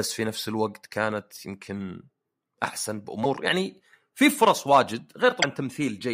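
At 3.23 to 3.26 s and again at 5.41 to 5.44 s the speech skips forward with a brief glitch, each lasting under 30 ms. This is likely a broken MP3 bit reservoir. Frames were lost, so the following frame reached back for borrowed data and decoded bytes belonging to a different frame. Each glitch spans roughly one 24 ms frame.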